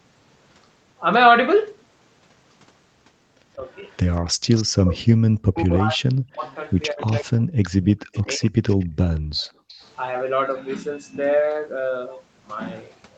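Between 3.56 and 3.64 s, both ends of the call were likely talking at once, and the echo canceller, unable to tell the near talker from loudspeaker echo, turned everything down. This is speech suppressed in double talk: a shallow dip of roughly 5 dB lasting well under a tenth of a second.

From 3.9 to 4.63 s comes an echo leak. The far end's canceller likely failed to remove all of the loudspeaker sound reaching its microphone, and the residue returned to this side. A faint copy of the voice trails it by 185 ms, about 15 dB below the speech.

Inside that stretch, from 4.32 to 4.45 s, the canceller clamped the microphone hard while the loudspeaker played. This is background gated by the echo canceller: the room sound falls away by about 38 dB for a moment and then returns.

From 4.83 to 8.52 s, double-talk suppression returns much more heavily, likely because the canceller again could not separate the two talkers. 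For roughly two seconds in total, the voice sinks by up to about 40 dB.

During and just after that passage, the echo leaks through again at 6.43 to 7.2 s, about 20 dB under the speech, and at 8.12 to 8.86 s, about 25 dB under it, still arriving 185 ms late each time.

From 8.86 to 9.76 s, the background is gated once more, dropping by about 37 dB for roughly half a second in total. Inside that window, from 9.4 to 9.74 s, a last scrap of echo leaks back at the same 185 ms delay, about 25 dB below the speech.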